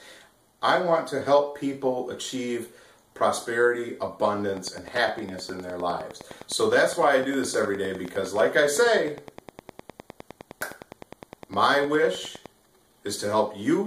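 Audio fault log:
4.53–12.53 s, Wi-Fi interference: a steady ticking runs for eight seconds at close to ten ticks per second, sitting around 20 dB below the main sound. The ticks are spaced 102.4 ms apart, the interval of a Wi-Fi beacon. A nearby Wi-Fi radio is sending these periodic bursts, and the audio circuit picks them up and rectifies them. This turns the radio energy into audible clicks at the beacon rate.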